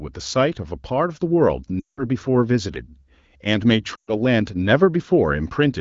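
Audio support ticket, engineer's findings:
Lost AMR speech frames at 1.79–2.05 s and 3.96–4.11 s. Decoder conceals the gaps by stretching the last good frame with falling gain. Sound drops to near silence quickly (wideband), then returns rough.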